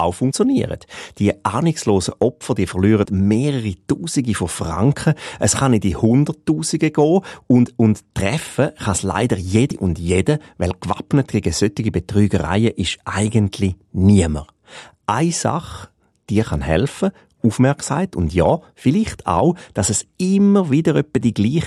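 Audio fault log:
0.30, 3.04, 9.71 and 17.88 s: damaged data in a compressed stream. Each is a single short blip, shorter than 20 ms, cutting into the speech. Bytes in the compressed stream were corrupted at these points. The decoder could not read the frame there correctly and lost sync. It then hunted for the next valid frame header. The misread data comes out as a chirp, squawk, click or short hole instead of speech. The speech resumes once sync returns.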